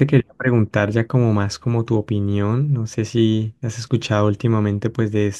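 Listening to the speech recording, nothing stood out as a technical problem at any point.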